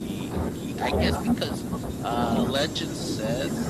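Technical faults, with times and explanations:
Nothing stood out as a technical problem on listening to this speech recording.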